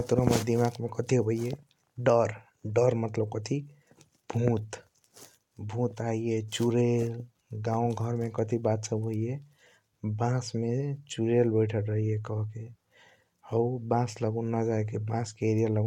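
No technical faults are audible.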